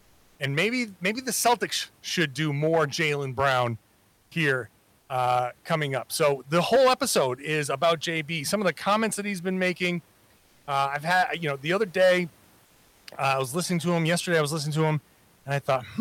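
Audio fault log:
Throughout: hard clipping. Loud peaks are driven about 12 dB past what the chain can pass, so around 2% of the waveform is sliced flat. Those squared tops add high harmonics. The result is a harsh, fuzzy edge on every loud syllable.
4.11–4.31 s, 4.99–5.09 s, 10.37–10.67 s, 12.65–13.05 s: comfort noise in place of the background. Pauses of 200, 100, 300 and 400 ms lose the real room noise. A smooth, featureless hiss fills them, about 1 to 7 dB quieter. Likely Opus discontinuous transmission.
5.07 s: onset clipped by the voice detector. About 20 ms is missing from the start of "coming up", replaced by the synthetic fill. The phrase therefore snaps in abruptly, without its soft attack. The likely cause is a voice detector slow to reopen.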